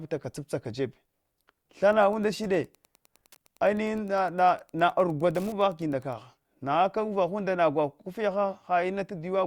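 Between 1.88 s and 6.21 s there is Wi-Fi interference: a radio's beacon, sent every 102.4 ms, is rectified by the audio circuit into a faint, steady ticking about ten times a second. Its slow, even rate separates it from the rapid buzz of GSM interference.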